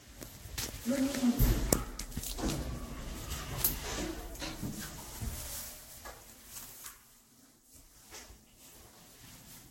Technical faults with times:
0.00-9.71 generation loss

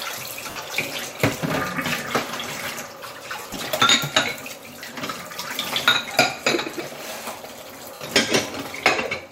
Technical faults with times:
0.50-0.56 lost LE Audio frames
3.40-3.58 lost LE Audio frames
7.94-8.01 lost LE Audio frames

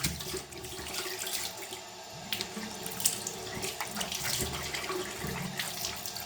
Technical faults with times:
2.33 dropped samples

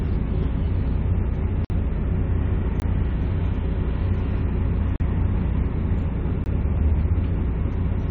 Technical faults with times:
1.65-1.70 block of digital silence
2.80-2.82 block of digital silence
4.96-5.00 block of digital silence
6.44 block of digital silence

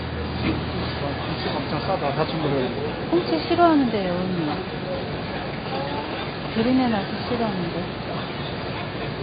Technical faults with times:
0.00-9.22 AAC compression

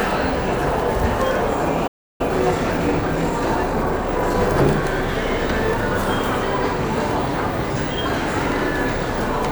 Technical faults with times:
1.87-2.21 playback stall
2.21-4.35 time-compressed catch-up

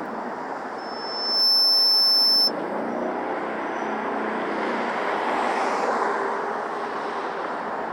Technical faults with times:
0.78-2.52 loudspeaker feedback squeal

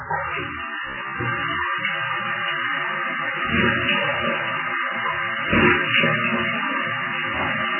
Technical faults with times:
0.00-7.79 MP3 compression

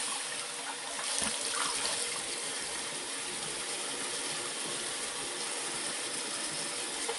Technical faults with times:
0.00-7.18 MP3 compression

